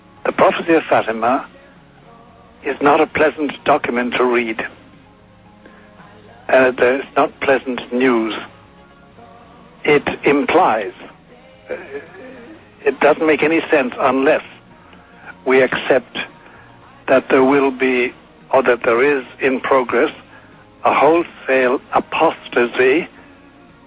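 No technical faults can be heard; the signal carries nothing above 4 kHz, the narrow telephone band of a call path, which fits G.711 mu-law coding at 64 kbps.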